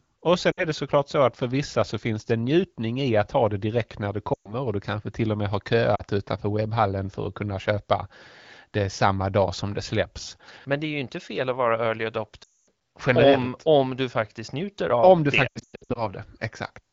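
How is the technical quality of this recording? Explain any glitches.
The recording has five dropouts where the decoder concealed lost AMR speech frames. Through the wideband HD Voice codec the speech has only light coding damage, consistent with a mid-to-high AMR-WB rate around 16 kbit/s.

The lost AMR speech frames occur at:
0.51–0.65 s
4.33–4.54 s, after "det direkt när det" and before "och du kanske till"
5.95–6.02 s, after "till och med har" and before "utanför webbhallen för att"
12.43–12.69 s, after "fel att vara early"
15.48–16.07 s, where about 340 ms of gaps are scattered, the longest run about 100 ms

Transmission errors corrupted these frames, so the decoder filled each gap by repeating the last good pitch and vocal-tract settings at decaying gain. The short gaps, about 40–60 ms, drop to near silence within two frames. The longer ones, around 120 ms and 240 ms, also drop to near silence within two frames. 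Speech then returns weak or rough for a moment. The final stretch sputters with repeated small breaks.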